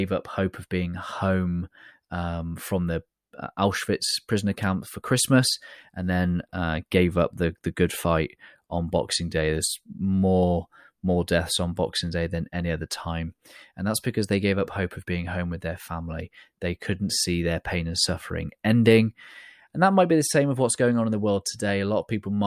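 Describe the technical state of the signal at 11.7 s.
Nothing is wrong with the signal at 11.7 s: the speech runs through that moment intact, with no dropout, distortion or glitch to be heard.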